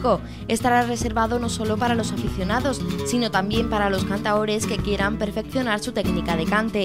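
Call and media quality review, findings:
Sample clock jitter, 0.66–3.84 s: converter clock wobble; hiss about 35 dB down follows loud, bright passages and vanishes in gaps, unlike steady background noise.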